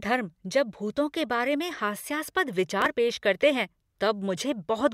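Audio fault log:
2.71–2.86 s, processor overload crackle: a short gritty burst where the processor fell behind and kept missing its deadlines, so small chunks of the speech simply dropped out with hard edges. The spacing fits roughly seven skipped buffers of about 5 ms each.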